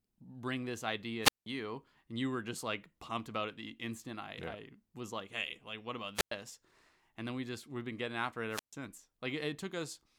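A speech clip with three wireless microphone squelch dropouts, at 1.22–1.46 s after "bring this", 6.15–6.31 s after "like what about", and 8.50–8.73 s after "been getting after it". Each time, a short burst of hiss precedes a near-silent gap of about 0.18 s, 0.10 s and 0.14 s respectively before the speech resumes. The FM radio link weakens, and the receiver's squelch mutes its output until the signal recovers.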